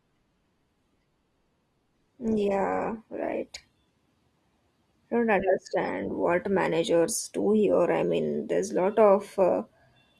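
For the first 4.0 s the speech sounds thin and smeared: the top end is either gone or replaced by a fizzy, synthetic-sounding treble, and codec artefacts are stronger. That's an adaptive stream starting at a low bitrate, which fits a low-rate Opus stream around 16 kbit/s. Once the player has gauged the connection, it switches to a better stream, and at 4.0 s the clarity jumps up abruptly with no gap, consistent with roughly 64 kbit/s.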